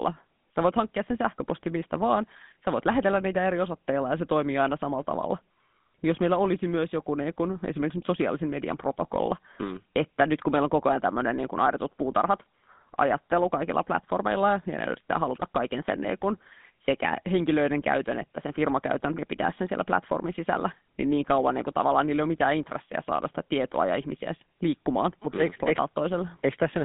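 GSM full-rate codec damage runs throughout the speech. This early mobile codec models the vocal tract as a filter and excites it with a regularly spaced pulse train, discarding much of the fine detail in the excitation, which fits its roughly 13 kbps rate. The result is a plainly audible buzzy, gravelly roughness on the voice. The band is confined to about 150 Hz to 3.6 kHz, with nothing above 3.8 kHz, leaving the sound thin and dull.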